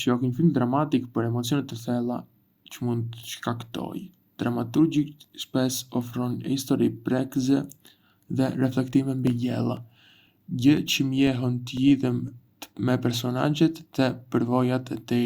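From 9.27 s to 12.28 s the speech carries periodic USB or driver dropouts: every 0.5 s, about seven times, a background task stalls the audio path and a couple of milliseconds go silent. The gaps come as steady ticks, evenly spaced, not at the scattered times random clicks would.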